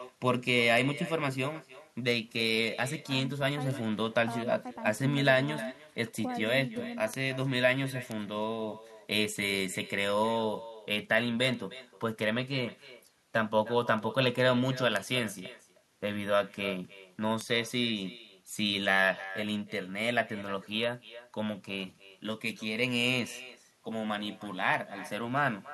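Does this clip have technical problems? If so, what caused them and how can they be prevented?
Yes. There are two faults. The first is echo with no canceller, present for the whole clip. The far end is playing the call through a loudspeaker, and its microphone sends that sound straight back. Each phrase is followed, roughly a third of a second later, by a copy about 17 dB quieter that sounds thinner. On a spectrogram, every burst of energy has a fainter duplicate offset by that fixed delay. To prevent it, enable acoustic echo cancellation at the far end or have that side use a headset.

The second is word clock ticks, running from 0.28 s to 25.72 s at roughly one every half second. A receiving device on its own free-running clock is reading a digital link without locking to the sender. The two clocks appear to differ by a few tens of parts per million, and each time they slip past each other a single sample is dropped or repeated. 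This leaves a sharp click of uneven strength. In the waveform, each slip shows as a one-sample discontinuity. On a spectrogram, each appears as a thin vertical line spanning the whole frequency range, evenly spaced along the time axis. To prevent it, lock the receiver to the incoming signal's clock or to a shared word clock.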